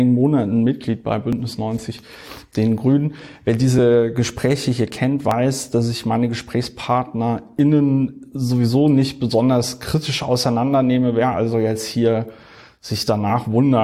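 Small skips land at 1.33, 5.31, 9.31 and 13.30 seconds, one every 4 seconds. This is overlap between stream segments. Adjacent 4-second segments claimed overlapping times. The player trimmed sound that was never doubled. Each time, under 20 milliseconds vanishes and the waveform jumps.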